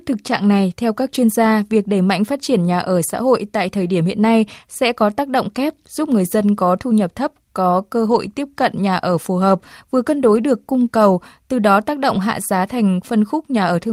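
A speech clip with three brief spots of lost packets rebuilt from error correction: 8.11–8.17 s, between "nhập thấp có cơ" and "tiếp cận"; 10.35 s, after "phù hợp vừa cân"; and 12.13–12.19 s, before "hạ giá". Each is rough and noisy, with no gap. Unlike plain loss concealment, which smears or buzzes, these carry real but coarse low-bitrate copies, sounding like one or two packets each.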